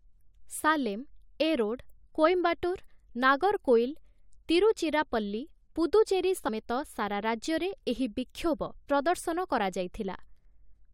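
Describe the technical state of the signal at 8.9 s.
At 8.9 s the speech signal is intact, with no dropout, distortion or other fault audible at that moment.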